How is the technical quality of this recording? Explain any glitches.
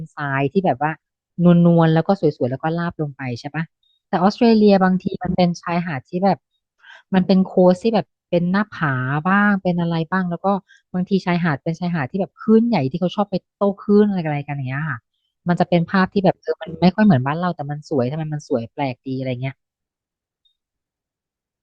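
No technical faults are audible.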